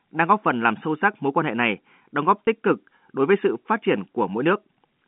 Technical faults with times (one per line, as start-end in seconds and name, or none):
2.46 packet loss with pitch repetition